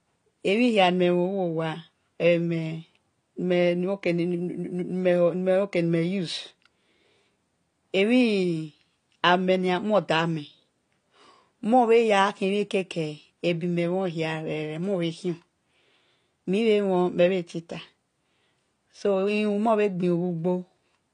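From start to finish the speech sounds dull and smeared, with a warbly, fizzy edge on sibilants and nothing above 9.7 kHz. That's likely AAC compression at a low bitrate, around 32 kbps, where the encoder drops the top band and thins out the spectrum.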